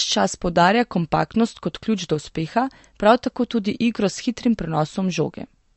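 Throughout the speech, nothing reaches above 8.1 kHz, and the audio has a plainly audible watery, swirling quality with smeared consonant attacks. This points to likely MP3 compression at a low bitrate, roughly fitting 43 kbps, where the encoder drops treble and switches weak frequency lines on and off.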